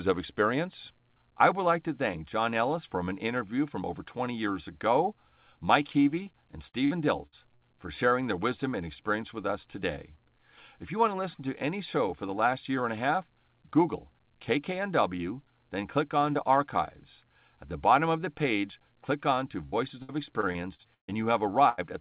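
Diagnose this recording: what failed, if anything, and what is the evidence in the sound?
Short concealed packet loss on the network side of the call shows up twice, at 5.92–5.95 s and 6.23–6.27 s. Each is a brief smear or wobble lasting a few hundredths of a second. Both times about 20 ms of audio never arrived and the decoder patched the hole by extending the preceding sound, then blending back in. What separates this from a storage or driver dropout is that the gap is filled with continued sound rather than silence or a hard click.

Repeated packet loss gives a choppy, robotic quality over two stretches. From 6.69 to 7.62 s there are four holes totalling about 200 ms, the longest 56 ms, with roughly a fifth of the span concealed. From 19.66 to 21.13 s there are eight holes totalling about 360 ms, the longest 139 ms, with about a quarter concealed. Because the choppiness comes and goes in clusters, it points to the network rather than the codec. 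The audio band, which stops at 4 kHz, fits a G.711 A-law call path.

A burst of packet loss at 21.69–21.80 s removes about 80 ms in one block. The receiver stretches the last sound into a held buzz or hiss that fades out, and the audio picks up again further along with the intervening part gone. Unlike the short concealments, this is one longer fading fill, and the sound after it jumps ahead rather than merely smearing.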